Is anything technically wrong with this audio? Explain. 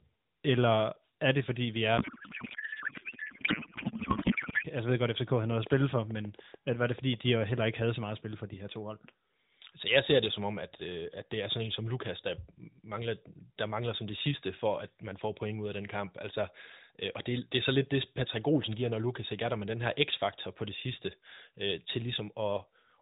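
Yes. From 1.98 to 4.67 s there is a codec payload misread: the speech turns into garbled warble, which points to octet-aligned AMR frames being read as bandwidth-efficient. It is continuous and not gapped, so it is not packet loss.

From 4.91 to 8.04 s a regular train of clicks ticks at 6.73 per second, about 20 in all, peaking about 5 dB above the speech. The clicks are likely caused by nearby interference. They have much the same shape and carry on through pauses, unlike codec glitches.

The narrowband AMR-NB path sounds lightly coded throughout, which fits a 12.2 kbps mode.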